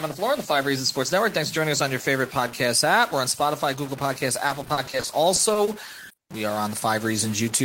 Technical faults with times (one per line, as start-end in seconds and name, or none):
0.00-7.65 stuck bit
4.47-6.19 repeated packet loss (robotic sound)